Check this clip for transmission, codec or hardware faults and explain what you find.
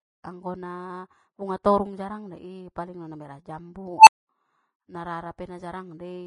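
Two faults are present: a coded-audio sound throughout and a filter blow-up near the four-second mark.

Across the whole speech clip the treble is hissy and grainy, with roughened tones, smeared consonant attacks and nothing above 10.7 kHz. This is likely Vorbis compression at a low setting, around 27 kbps, where coarsely quantised high-frequency detail turns into noise-like grain.

From 3.98 to 4.29 s an unstable filter takes over. A tone around 1 kHz swells over about 92 ms into a loud, clipped squeal, then drops out into roughly 224 ms of silence. A recursive filter's feedback ran away until its values overflowed and it reset.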